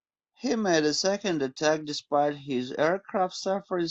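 At 1.16 s, just after "made a", the audio switches abruptly to an adaptive stream at a lower bitrate and stays there until the end at 3.90 s. The player moved to a cheaper encoding when the connection slowed. Codec artefacts rise, which fits a drop from roughly 96 to 32 kbit/s AAC. Unlike a rebuffering stall, there is no gap. Unlike a uniformly low-bitrate file, the first second plays at the higher bitrate.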